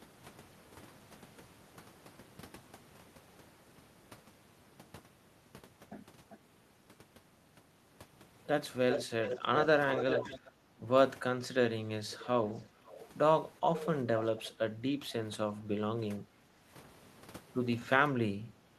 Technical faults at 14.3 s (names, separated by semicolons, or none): echo leak